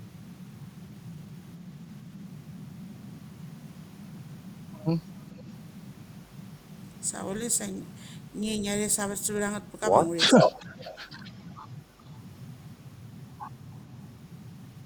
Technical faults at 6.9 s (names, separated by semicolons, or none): none